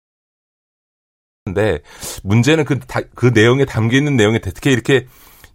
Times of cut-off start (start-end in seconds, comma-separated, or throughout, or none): 0.00-1.47